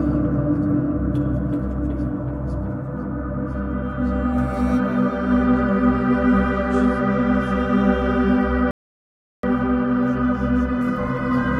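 At 8.71 s the audio drops into silence and stays there until 9.43 s. This is a rebuffering stall: playback consumed all the audio that had been downloaded, and the player halted until the next portion arrived. When sound returns, it picks up exactly where it broke off, with nothing skipped or repeated. The only effect is a dead gap of about 0.72 s inserted into the timeline, which pushes everything after it later.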